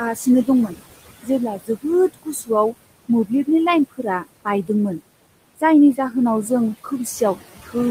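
Noise suppressor artifacts run through the whole recording: the suppressor pulls the room noise, sitting about 14 dB under the speech, down by about 20 dB frame by frame, so the background sinks in pauses and swells under speech.

Speech cut by the noise suppressor occurs at 0.15–0.81 s, 1.23–2.74 s, 3.08–3.48 s and 3.97–5.0 s, where the suppressor misreads soft speech as noise and turns it down by about 13 to 19 dB. Brief stretches, a fraction of a second each time, sound swallowed or faint.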